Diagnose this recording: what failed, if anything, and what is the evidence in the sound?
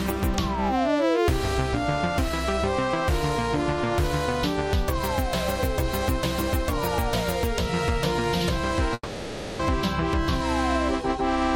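Network stage: a long network dropout at 8.93–9.61 s, likely lost packets. The receiver stretches the last sound into a fading buzz, and 0.66 s never returns.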